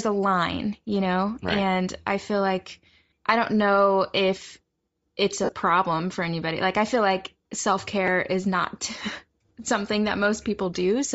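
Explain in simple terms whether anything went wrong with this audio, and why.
Throughout the speech the voice has a breathy, grainy edge, as if fine hiss were mixed into the upper part of the sound. This is likely Bluetooth LC3 compression, the codec used by Bluetooth LE Audio. When the link is squeezed, LC3 drops much of the high-frequency detail and fills the gap with noise that sounds similar. Here that trade-off is plainly audible, and it runs through the whole clip.

Twice there is a tiny stutter, heard as a quick click or buzz rather than a clear repeat. The first is at 0.95 s, between "a line" and "know right and I", and the second is at 8.07 s. This is a repeated buffer. New audio didn't arrive in time, so the device played the last small chunk again, three extra times at the first spot and twice at the second. The chunk is so short, which fits a buffer of about 5 ms, that the repeats blur into a click.

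From 5.44 to 5.52 s, between "if it's" and "for anybody", the voice breaks into a brief noisy smear. At 8.99 s, just after "is not", there is a shorter blip of the same kind. These are lost LE Audio frames. Wireless frames failed to arrive, so the decoder guessed by reusing the last sound with its detail scrambled. At 5.44 s the losses are scattered over about 75 ms, and the longest unbroken gap is about 50 ms.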